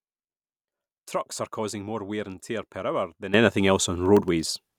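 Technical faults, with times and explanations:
3.34–4.78 s, sudden gain jump: right after "tear per hour than", speech and background noise step up together by about 13 dB, likely from a gain change applied without a ramp.
4.06–4.43 s, processor overload crackle: several very short dropouts to silence, consistent with sub-millisecond buffers missing their deadlines, produce a gritty crackling tear over the speech.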